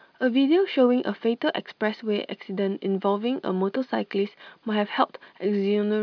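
No technical faults are audible anywhere in the speech.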